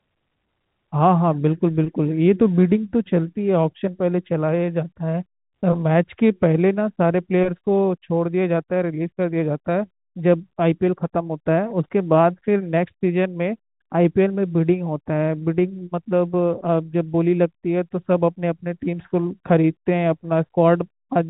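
Speech carried over G.711 A-law telephone coding at 64 kbps, band-limited to 4 kHz as that format requires, with no technical faults to report.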